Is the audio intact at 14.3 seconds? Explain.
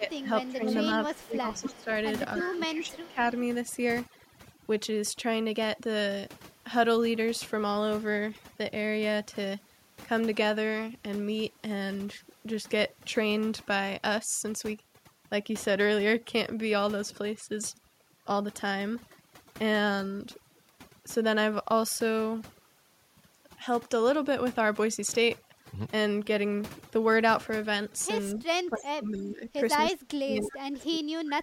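No. At 14.3 seconds, as everywhere else in this speech clip, there is overdone noise removal. The noise reduction clamps individual frequency bands down or off whenever they sit close to its noise estimate, so the background collapses into twinkling, warbling specks and quiet parts of the voice are taken away too. On a spectrogram the background shows as scattered isolated dots in an otherwise empty floor, with speech harmonics ragged at their edges.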